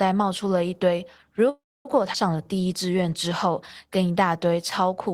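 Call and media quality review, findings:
Call audio freeze, 1.49 to 1.87 s: speech halts, last sound carried on briefly as a fading buzz, then about 260 ms of silence. Likely packets delayed and jitter buffer ran dry. Playback resumes where it stopped, nothing lost, roughly 360 ms inserted.

Skip ahead at 2.13 to 2.16 s: playback jumps forward with almost no gap. Roughly a tenth of a second of speech missing. Receiver-side jitter buffer overflowed and dropped audio or packets dropped in transit. Both sides joined nearly directly.

Jitter buffer slow-down, 2.36 to 3.03 s: speech runs at about 88% speed, pitch unchanged, sounds drawn out. Buffer repeated single pitch periods to rebuild its reserve. About 90 ms added across the stretch.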